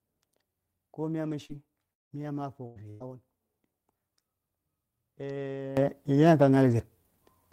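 Short concealed packet loss at 1.45 to 1.52 s is the first problem in this speech recording. About 40 ms never reached the decoder in time, so the receiver extended the preceding sound for roughly 39 ms before blending back, leaving a brief smear or wobble. A lost packet rebuilt from error correction follows at 1.49 to 1.51 s, and again at 2.76 to 2.78 s and 3.00 to 3.02 s. Each time, 20 ms was played from the low-bitrate copy carried in the next packet, so there is no gap, but those frames sound rougher and noisier. A long network dropout at 1.93 to 2.23 s has the likely cause of a stretch in which no audio arrived. The last sound is stretched into a fading buzz or hiss for about 170 ms, then about 170 ms of silence follows, and the sound resumes with roughly 180 ms gone. A burst of packet loss hits at 2.66 to 2.83 s and again at 2.90 to 3.03 s. Each time about 100 ms went missing, and the receiver continued the previous sound for 92 ms and then 99 ms while turning it down, giving a held buzz or fading hiss before the audio picks up past the gap. 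A sudden gain jump at 5.77 s raises the sound and the background together by about 15 dB, which stays in place to the end. Its likely cause is a gain change applied between one sample and the next with no ramp, which can add a click at the step.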